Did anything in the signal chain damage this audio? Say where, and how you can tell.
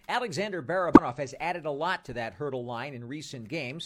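Yes. The compressed stream carries damaged data, a stretch of corrupted bytes that the decoder could not read cleanly. From 0.93 to 0.99 s, just before "has added a lot", the speech breaks up for a brief stretch of about 54 ms. The decoder misread the bad frames, lost sync, and skipped ahead to the next valid frame header, so the audio at that point came out wrong.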